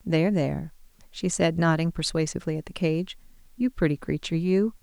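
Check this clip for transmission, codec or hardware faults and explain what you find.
A constant hiss sits under the speech from start to end, the sign of low bit depth with dither. The audio seems to be carried at only 10 bits, and a little random noise was mixed in before each sample was rounded. That turns the rounding error into steady white noise about 40 dB below the speech, heard as an even hiss without distortion. A spectrogram shows a flat noise floor across all frequencies, and the waveform shows a thin fuzz even in pauses.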